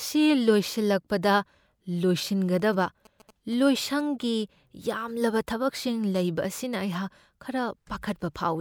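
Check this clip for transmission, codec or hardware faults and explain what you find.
One hardware fault is present: GSM signalling bursts. From 2.60 to 4.01 s, a nearby 2G phone sends short radio bursts while signalling. The audio circuit rectifies them. They are heard as a galloping dit-dit-dit of brief 217 Hz buzzes, well below the speech.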